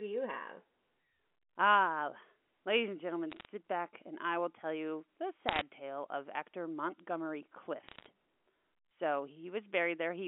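Three short bursts of bit errors on a digital phone line crackle through the speech at 3.32 to 3.45 s, 5.49 to 5.61 s and 7.89 to 8.06 s. Flipped bits, under one percent, corrupt single samples, so you get sharp ticks over the narrow telephone-band voice.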